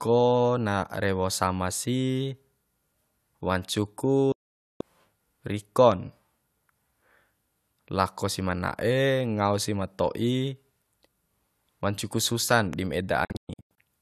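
At 4.32 s the speech mutes for about half a second, until 4.81 s. It is a digital broadcast dropout: frames went missing and the receiver muted, with a 3 ms fade. The gap fits a run of 24 ms frames. From 5.92 to 5.94 s a single loud pop sits about 10 dB over the speech. Just after "wancu ku", from 12.52 to 12.75 s, two pops follow in quick succession. The speech runs on beneath them. A plug or switch transient is the likely cause. From 13.25 to 13.81 s a second dropout breaks the sound into short holes. The longest is 120 ms.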